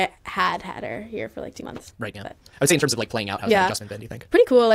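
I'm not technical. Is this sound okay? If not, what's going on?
No. There's a time-stretched section from 1.54 s to the end, right after "her here for like". The speech suddenly runs 1.9 times faster at the same pitch, sounding rushed. The likely cause is software squeezing it by dropping short pieces.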